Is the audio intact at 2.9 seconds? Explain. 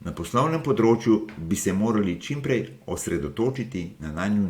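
Yes, the audio is intact at 2.9 seconds, with no dropout, click, distortion or other fault audible at that moment.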